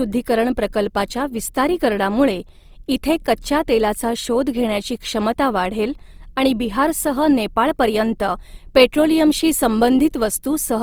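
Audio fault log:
Throughout: Opus compression. The speech has a grainy, rough texture across the whole clip, with noisy, plainly audible sandy fizz where clean harmonics should be. Bandwidth stays fullband, reaching up to about 20.4 kHz, so the sound is not muffled. This is likely Opus in its music-oriented mode at a lowish rate, roughly 24 kbps, filling starved bands with folded or noise-like content. Unlike MP3, there are few spectral holes and less swirling.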